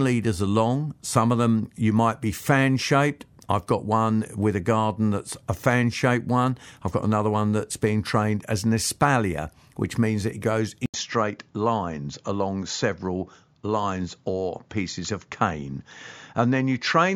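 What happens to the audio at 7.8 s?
Nothing goes wrong at 7.8 s: the speech continues without any dropout, click, distortion or other fault at that moment.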